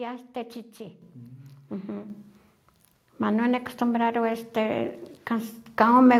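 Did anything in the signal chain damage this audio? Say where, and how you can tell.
Yes. The microphone volume was stepped up at 1.02 s and 2.1 s, by about 8 dB and about 5 dB. This happened in call processing. Voice and background jump together, so the speaker did not simply get louder.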